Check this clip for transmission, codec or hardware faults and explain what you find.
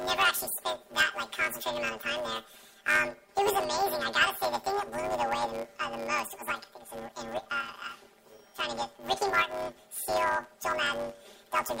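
One fault runs through the whole clip: planar audio read as interleaved. Each 10 ms block of left-then-right samples is read as alternating pairs, so every block plays twice at double speed. The result is a robotic buzz at 100 Hz, with no clear octave shift. On a spectrogram this shows as a comb of lines spaced 100 Hz apart, and the waveform shows hard seams every 10 ms.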